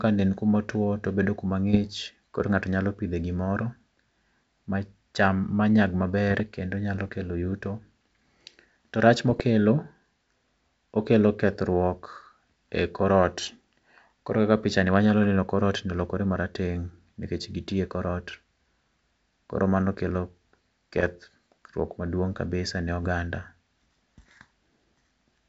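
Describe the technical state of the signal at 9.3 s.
Short pops and a rough, gritty burst with brief jumps in level run from 9.27 to 9.41 s. These are bit errors on an ADPCM link, at a rate of around half a percent. Each flipped bit throws off the G.722 decoder's step size and predictor, so the damage rings on past the error itself.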